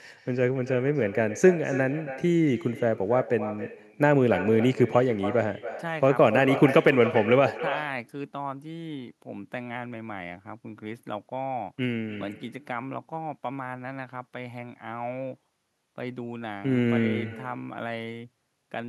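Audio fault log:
Throughout, echo with no canceller: every phrase of speech is shadowed roughly a third of a second later by a thinner copy about 12 dB down. A loudspeaker on the far end feeds its microphone, and nothing removes the returning signal.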